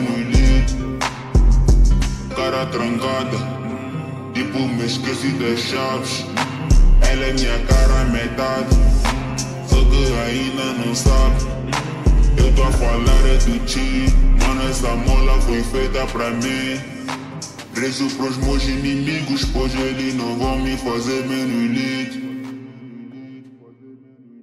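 No technical faults can be heard anywhere in the clip. Nothing in the audio calls for a timestamp or a note on its cause.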